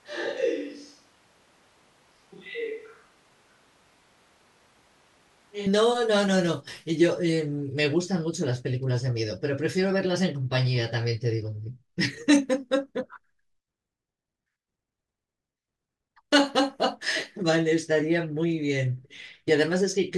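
From the very start until 5.66 s, the speech sounds roomy and hollow, thin in the bass, roughly 10 dB quieter, and carries background noise only about 30 dB below it. The likely cause is a switch to a distant microphone after the close one dropped out. Added reverb or an EQ change would not shift level, tone and noise floor together, nor snap back at once as the close sound does at 5.66 s.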